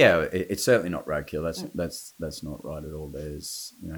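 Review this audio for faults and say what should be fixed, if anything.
Low bit depth with dither affects the whole speech clip. A steady, even hiss sits roughly 30 dB below the speech. It has no distortion. Dither before coarse rounding turned the error into white noise. The noise level fits about 9 bits. To prevent it, record and export at 16 or 24 bits.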